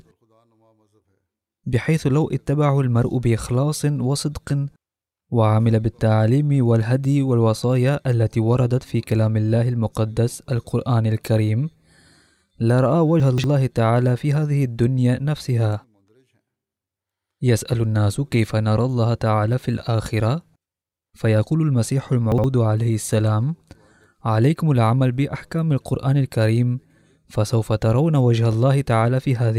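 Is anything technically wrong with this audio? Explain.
Yes: the speech has two moments of chunks out of order. From 13.2 to 13.44 s, a 60 ms block plays three blocks late, and from 22.32 to 22.44 s, two neighbouring 60 ms blocks swap. Nothing is lost, but the sequence is scrambled, so each spot sounds like a brief jumbled stutter. A waveform shows abrupt amplitude steps at 60 ms boundaries, and a spectrogram shows vertical seams where formant tracks jump discontinuously.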